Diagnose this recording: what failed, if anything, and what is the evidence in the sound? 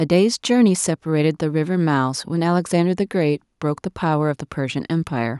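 Nothing failed here; I listened for trouble at every stage of the chain and there's simply nothing in this speech recording to point at.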